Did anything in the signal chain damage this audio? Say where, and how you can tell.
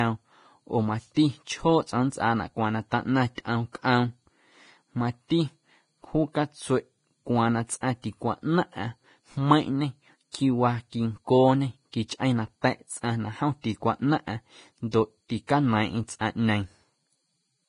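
Yes, at the codec stage. The audio is hissy and grainy with nothing above 10.5 kHz, likely from heavy Vorbis compression at a bitrate of around 28 kbps.

Pre-echo appears at 1.14–1.16 s and 10.32–10.34 s, just before "quiwaa quincooñe". About 20 ms and 26 ms of hiss precede each attack because the transform block spreads its quantisation noise across the quiet lead-in.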